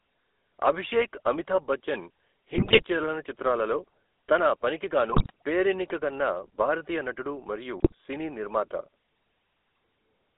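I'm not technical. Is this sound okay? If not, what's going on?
No. The whole clip has gone through the GSM full-rate codec, the original digital mobile-phone voice system. It rebuilds the voice from a simplified model of the throat and mouth driven by a coarse pulse pattern, and it discards everything above about 3.5 kHz and below about 300 Hz. That is why the speech sounds narrow, buzzy and gravelly throughout, with the roughness clearly noticeable.

There are also three short bursts of GSM bit errors, where corrupted data reached the decoder and it rebuilt a few slices of sound from wrong settings. The first runs from 2.54 to 2.83 s, right after "అభిషేక్ అమితాభ్ బచ్చన్" and before "చలనచిత్రాలలో తన". The second runs from 5.12 to 5.31 s. The third runs from 7.80 to 7.94 s, between "భారతీయ నటుడు మరియు" and "సినీ నిర్మాత". Each one breaks the voice into brief squawks, pops or gargling.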